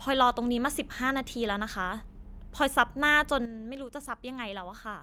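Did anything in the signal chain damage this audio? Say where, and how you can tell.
Yes. At 3.45 s the speech and the background noise drop together by about 9 dB in a single step and stay lower to the end: a sudden gain jump, likely a digital gain setting applied without a ramp. An AGC or fade would glide instead.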